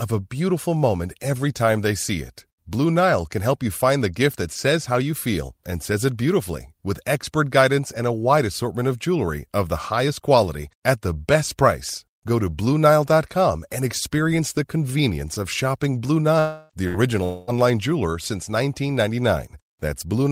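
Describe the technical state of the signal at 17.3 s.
At 17.3 s the speech gives way to a fading buzzy smear of the last sound, running from 17.24 to 17.50 s, about a quarter second, before resuming at "jeweler since". This is likely a long network dropout: packets stopped arriving, the receiver stretched the previous audio to fill the gap, and the missing speech never returned.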